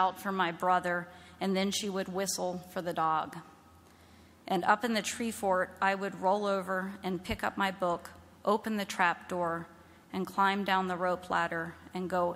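No technical faults can be heard anywhere in this audio.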